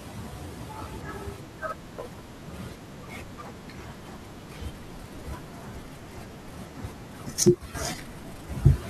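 At 7.47 s the speech and its background noise drop together by about 6 dB in a single step, holding there until 7.75 s. This sudden gain jump likely comes from a digital gain setting applied instantly rather than ramped, shifting the whole signal at once.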